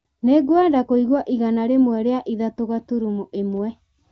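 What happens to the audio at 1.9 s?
Nothing goes wrong at 1.9 s: the speech carries straight through that moment, heard through the wideband HD Voice codec, with no dropout, glitch or other fault.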